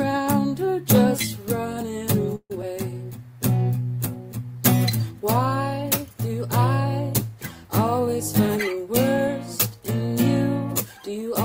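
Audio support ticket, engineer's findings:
2.35–2.52 s: audio stops moving forward, last sound carries on as a fading buzz or hiss, trailing into about 50 ms of silence, then resumes exactly where it left off. Likely a call audio freeze: delayed packets drained the jitter buffer, adding roughly 143 ms of delay, nothing lost.

2.62–2.64 s: brief smear right after that resume. Short concealed packet loss. About 40 ms of audio never made it to the decoder in time. Concealment only patched a few ms before blending back, so that stretch is simply gone, pulling back roughly the same amount of delay.

7.99–10.0 s: sound runs hurried, pitch unchanged, about 105% speed. Jitter buffer speed-up. Receiver trimming repeated pitch-period-sized chunks to shed excess buffered audio, around a tenth of a second total across the two seconds.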